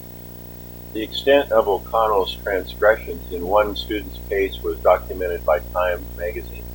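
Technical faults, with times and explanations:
Throughout: video or display buzz. There's a steady buzz at 59.94 Hz with hash riding on top, plus a thin whine at 15.7 kHz, all sitting roughly 15 dB under the speech. That's a screen or video cable leaking its field and line rates into the audio.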